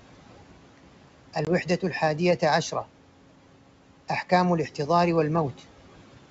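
Noise suppressor artifacts run through the whole clip. The suppressor pulls the steady room noise down by about 12 dB, frame by frame. So the background dips in pauses and swells back under the speech.

At 1.45 s there is packet loss on an ADPCM call. About 20 ms drops out, which fits a couple of lost packets. The hole has hard edges. The decoder's predictor then lags the sender's, so the speech returns with brief distortion before settling by 1.50 s.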